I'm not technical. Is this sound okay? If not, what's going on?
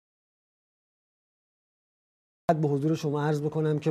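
No. The clip opens in dead silence that lasts until about 2.49 seconds, and only then does sound come in. This is an audio dropout to silence. The input was likely cut off, so the recorder wrote only silence. Whatever happened during that stretch is lost.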